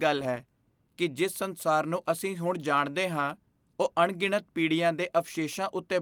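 Listening to the speech recording turned up nothing that stood out as a technical problem.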